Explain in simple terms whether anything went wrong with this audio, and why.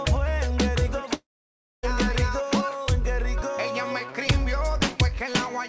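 Around 1.14 to 1.85 s the sound smears into a fading buzz, then goes quiet, likely a long network dropout that lost about 0.7 s of audio.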